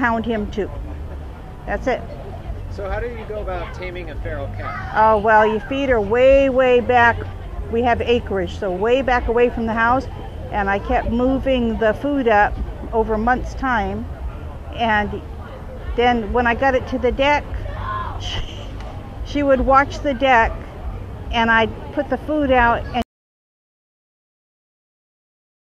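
At 23.02 s the sound cuts off mid-flow and never returns, leaving about 2.7 s of silence with no room tone through to the end. This audio dropout to silence likely comes from the input being lost, a disconnect or stray mute, while recording continued writing silence.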